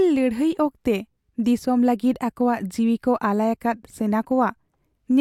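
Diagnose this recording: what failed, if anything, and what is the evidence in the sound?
Nothing failed here; at no point does the speech audio give any sign of trouble at any stage between the source and your ears.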